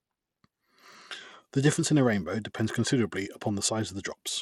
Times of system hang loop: none

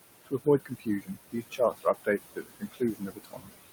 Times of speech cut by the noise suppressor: 0.25-3.69

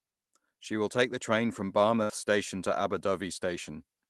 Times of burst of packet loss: 2.03-2.11

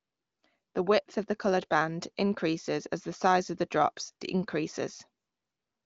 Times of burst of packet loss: none

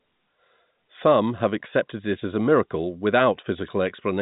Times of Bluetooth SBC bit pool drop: none

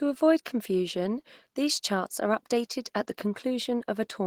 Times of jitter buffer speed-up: none

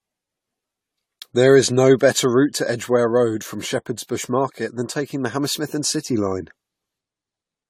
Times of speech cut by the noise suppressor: none

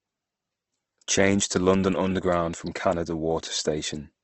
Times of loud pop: none

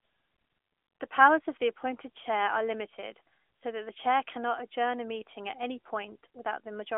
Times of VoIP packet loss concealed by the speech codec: none

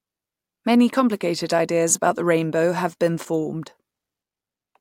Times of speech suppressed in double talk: none

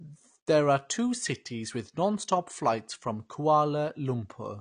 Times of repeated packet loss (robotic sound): none

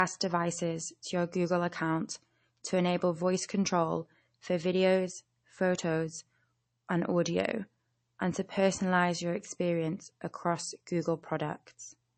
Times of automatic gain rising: none

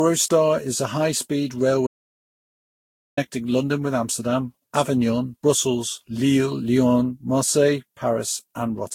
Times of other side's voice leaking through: none

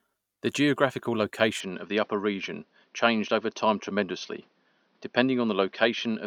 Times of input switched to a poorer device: 1.60-6.26

